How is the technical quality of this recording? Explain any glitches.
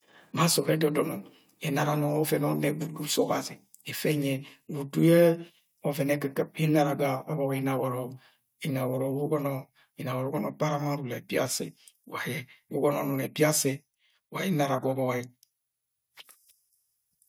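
On listening, nothing in this recording stood out as a technical problem.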